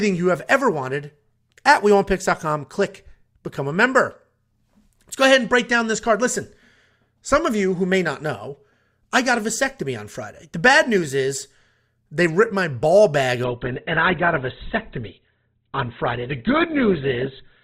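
From 13.44 s to the end at 17.63 s, the speech abruptly turns dull, with nothing above 4.1 kHz and rising codec artefacts, yet the sound never breaks. This is an adaptive stream at a lower bitrate: when the connection slowed, the player switched without a gap to a cheaper encoding. The loss of treble and rise in artefacts fit a step down from roughly 64 kbit/s to 12 kbit/s Opus.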